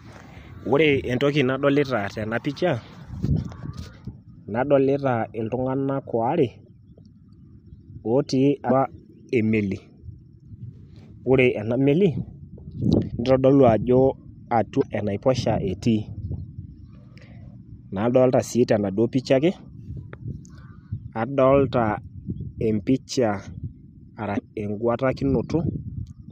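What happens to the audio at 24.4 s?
From 24.36 to 24.39 s the speech skips forward, with roughly one 26 ms frame disrupted. This is likely a broken MP3 bit reservoir: frames were lost, so the next frame fetched borrowed bits from the wrong data and decoded briefly as corruption.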